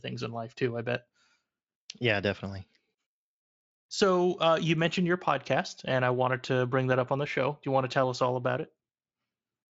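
Speech, with no technical faults to report.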